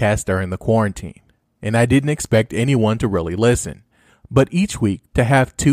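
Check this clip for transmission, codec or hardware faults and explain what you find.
No faults detected here.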